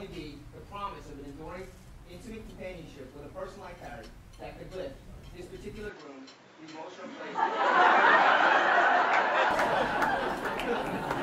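From 5.89 to 9.51 s the sound goes dull, with nothing above 7.6 kHz and new background noise well below it, likely an input switched to a poorer device.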